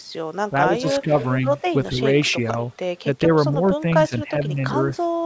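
A speech recording in which the voice dips by roughly 10 dB, about 5 dB at the third instance, at 0.67–1.43, 1.91–2.01, 3.04–3.30 and 3.81–4.61 s. This is speech suppressed in double talk, likely an echo canceller attenuating the talker while the far end speaks. Echo leak appears at 0.83–1.62 and 2.25–3.01 s as a delayed copy arriving 446 ms late, about 15 and 25 dB below the speech, likely from loudspeaker pickup the canceller failed to remove.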